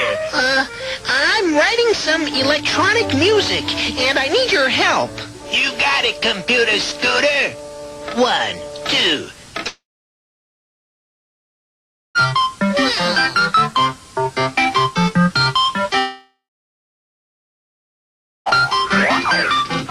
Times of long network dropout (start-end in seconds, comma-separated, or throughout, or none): 9.67-12.18, 15.99-18.49